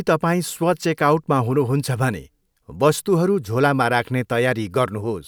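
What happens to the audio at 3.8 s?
Nothing goes wrong at 3.8 s: the speech carries on intact through that moment, with no dropout, click, distortion or other fault.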